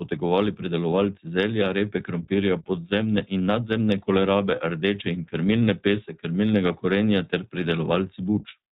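From the start, the speech runs through the iLBC codec, and the damage is plainly audible. Nothing above 4 kHz survives, so sibilants lose their edge, and the voice has a rough, slightly synthetic grain. The grain and clarity point to the 15.2 kbps, 20 ms frame mode. The grain comes from the way iLBC coarsely codes each frame's excitation. That sets it apart from the smoother, duller blur of a plain telephone-band filter.

Between 4.56 and 4.60 s there is a brief patch of lost iLBC frames, which sounds like about one 20 ms frame going missing. The decoder fills the gap by repeating the last pitch cycle with some noise mixed in, so the sound briefly holds a faintly buzzy vowel instead of cutting to silence or clicking. Because iLBC frames stand alone, the voice is back to normal immediately afterwards, with no lingering smear.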